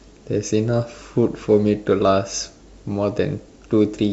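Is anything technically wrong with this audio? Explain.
No, nothing technical stands out here; it's just a short bit of speech with no faults to point to.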